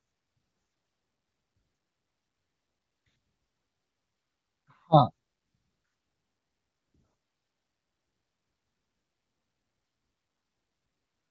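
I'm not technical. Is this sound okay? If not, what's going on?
Yes, nothing wrong here.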